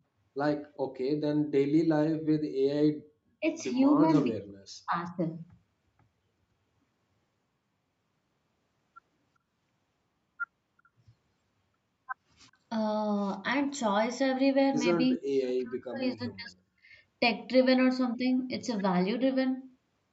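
At 0.74 to 0.94 s a faint delayed copy of the speech can be heard, trailing the original by about 397 ms and sitting roughly 40 dB below it. This is an echo leak. The far end was likely playing the call on a loudspeaker, and its echo canceller left some residue in the microphone signal, which was sent back. The same faint, 397 ms-late scrap returns briefly at 10.84 to 10.89 s.

From 2.14 to 2.57 s the room sound sinks by about 18 dB for roughly 0.4 s and then comes back. This is background gated by the echo canceller. While the loudspeaker was active, the canceller's suppressor pulled the microphone level down hard, and the ambience recovered once it released. A shorter dip of about 23 dB follows at 16.85 to 16.95 s.

Speech suppressed in double talk appears at 3.40 to 3.45 s as a shallow dip of roughly 10 dB. It is far deeper at 4.26 to 5.25 s and 15.17 to 16.57 s, where the talker's speech drops by around 40 dB for about 1 s and 1.5 s. 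Both sides were likely talking at once. The canceller could not separate the near talker from the loudspeaker echo, and its suppression took down the wanted speech along with the echo. Throughout, the band stops at 8 kHz, consistent with wideband Opus on the call path at around 64 kbps.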